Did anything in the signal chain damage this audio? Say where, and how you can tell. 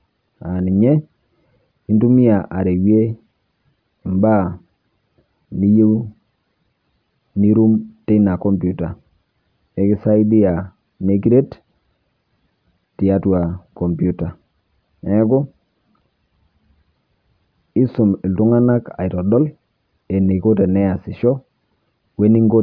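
No, nothing in the signal chain stood out as damaging this audio on listening.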